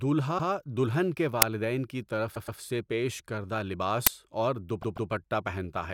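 Repeated frames at 0.37 s, just before "دلہن کے", replay a 120 ms stretch once. At 2.34 s a 120 ms stretch plays three times in all, and at 4.81 s a 144 ms stretch does the same. The result is a rhythmic stutter that adds time instead of losing it, unlike a dropout.

An uninitialised buffer at 1.42 s, after "دلہن کے", and at 4.07 s, after "طرف سے پیش کردہ", plays leftover memory as a loud crack. The cracks last 5 ms and 10 ms.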